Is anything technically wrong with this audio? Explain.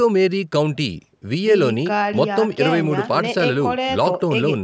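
No, nothing here is technically wrong: the speech has simply been through a call's microphone processing, so there's nothing above 8 kHz and the lowest bass is trimmed away, which is just how that path normally behaves.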